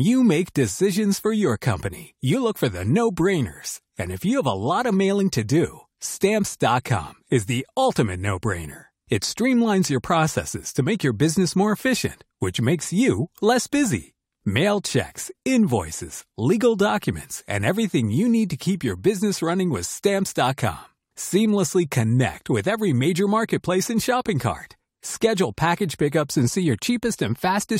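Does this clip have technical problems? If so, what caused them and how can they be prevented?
No, this speech recording has no technical problems. Nothing in it needs a fix or a preventive step.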